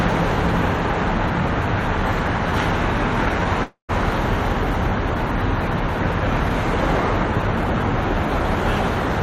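A recording of everyday sounds with two playback interruptions a fraction of a second apart. The first is a short stall from a late packet at 3.43 to 3.48 s. A packet missed its playout time, so the jitter buffer ran dry and the receiver stretched the last sound for about 22 ms, giving a brief held sound with a slight buzz or dip. Playback then resumed from the same point, so nothing is lost, but everything after it plays 22 ms later. The second event, from 3.64 to 3.91 s, sounds like a call audio freeze. The sound hangs as a fading buzz or hiss, then drops to silence for roughly 130 ms before the audio picks up where it stopped. About 251 ms is inserted with no content missing, adding that much further delay. The likely cause is packets held up in transit long enough to empty the jitter buffer, with concealment filling the wait.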